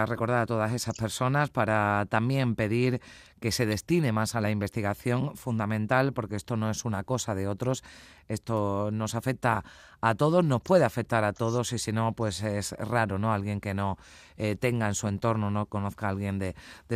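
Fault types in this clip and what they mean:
No technical faults can be heard in this speech recording; the signal stays steady and intact throughout.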